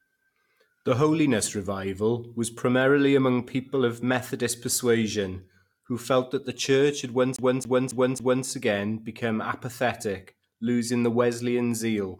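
From 7.36 to 8.46 s the speech is caught in a CD stuck on one turn. The same 0.27 s slice of audio plays four times over, each pass cut off by a brief mute as the laser jumps back a track at a scratch. It gives a fast, even stutter. On a waveform the segment shows identical blocks at a steady 274 ms spacing, and on a spectrogram the same pattern repeats with thin vertical gaps between copies.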